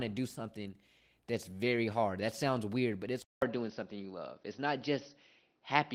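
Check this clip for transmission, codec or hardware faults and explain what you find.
One fault is audible. At 3.22 s the speech drops out for about 200 ms, then returns band-limited with nothing above 6 kHz, which likely points to an input switched to a poorer device. The replacement device passes a narrower band, so the speech sounds duller through the end, at about the same level, over a faint new noise floor far below the speech. The Opus voice compression carrying the full band before the switch adds only light coding texture.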